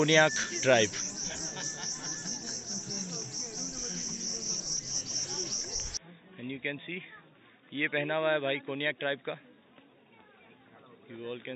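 Input switched to a poorer device, likely, at 5.97 s and lasting to the end: with no gap at the change, the sound abruptly turns dull and boxy, its top end cut off with nothing above 3.8 kHz, and it drops about 10 dB in level. A faint new background noise also appears, well below the signal. The narrower band, different tone and changed level and noise point to the recording input moving to another, lower-quality microphone or a headset call profile.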